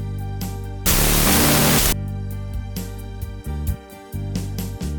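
From 0.86 to 1.93 s the audio has a wrong sample width: 16-bit data read as unsigned 8-bit gives loud noise over a buried, half-speed original an octave down.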